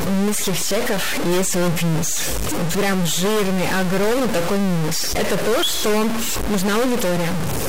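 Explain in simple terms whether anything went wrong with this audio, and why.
Something is wrong throughout. The speech sounds harsh and buzzy. Pauses fill with loud hiss instead of silence. This is a stuck bit. One fairly high digital bit is frozen, likely from a faulty wire or converter. Many samples come out wrong.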